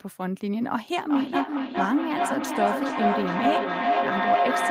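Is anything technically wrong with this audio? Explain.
Yes. Feedback howl runs from 1.1 s to the end. A mic-to-speaker loop regains level each pass, building a tone around 700 Hz. The loop repeats roughly every 400 ms, and the howl peaks about 4 dB above the speech.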